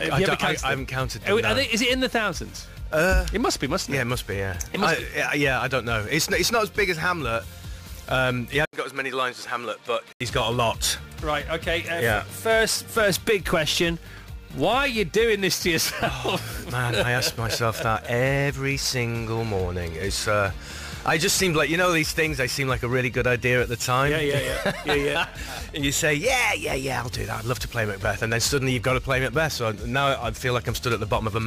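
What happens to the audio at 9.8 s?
At 9.8 s the audio is inside a stretch from 8.65 s to 10.21 s where the input likely switched to a poorer device. An 80 ms silence marks the switch, then the sound turns duller, with nothing above 13 kHz. It drops about 5 dB in level and carries a new noise floor around 35 dB below the signal. The substitute device's narrower band and different gain and self-noise give it that boxy, quieter character until the original input returns.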